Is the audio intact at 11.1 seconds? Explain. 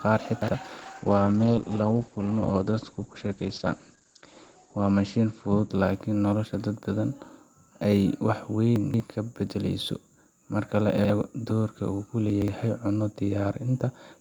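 No. Chunks out of order run from 10.98 to 11.1 s. A 60 ms chunk plays one chunk late, so the speech jumbles briefly.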